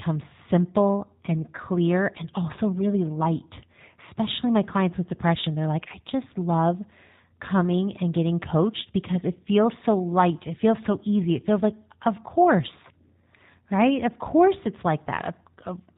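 Speech coded with the G.729 codec throughout, and the damage is plainly audible. The voice sounds slightly rough and synthetic, as it would when rebuilt from a vocal-tract filter, a pitch predictor and a few pulses per 10 ms frame, which fits an 8 kbit/s G.729A link. On a spectrogram, all energy stops at a flat ceiling near 4 kHz, and the harmonics look smeared and blocky from frame to frame.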